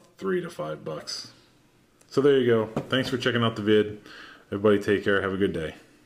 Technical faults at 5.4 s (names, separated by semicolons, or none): none